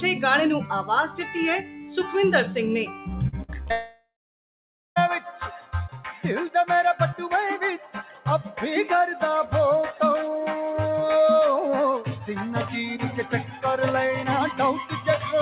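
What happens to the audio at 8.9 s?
At 8.9 s, a noise suppressor built for speech is still working on the sound, as it does throughout the clip, treating steady tones, ambience and decaying tails as noise and pulling them down by about 5 dB. Onsets pass largely untouched while sustained parts and tails sink, so the sound pumps and thins rather than holding steady. All of it arrives through a band that stops near 4 kHz, which fits a 64 kbps G.711 mu-law call path.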